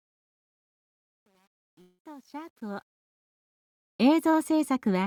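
From the start of the audio to about 3.21 s, the fade-in shows truncation distortion. The gain stage points to only 9 bits being kept, with no dither, so the quietest part, from 0 to about 2.51 s, is rendered in a few coarse amplitude steps. It sounds gritty rather than rising cleanly. On a waveform the low-level section looks like blocky staircases, and a spectrogram shows harsh broadband grit and harmonic smear.

Inside that stretch, from 1.81 s to 2.02 s, comes what is likely a long network dropout. About 180 ms of audio is missing, and the gap is covered by roughly 173 ms of concealment that carries the last sound forward as a fading buzz or hiss instead of true silence. When the audio resumes, the lost portion is simply skipped. A spectrogram shows a smeared, static band there, and the waveform shows a repetitive, decaying patch followed by a discontinuity in content.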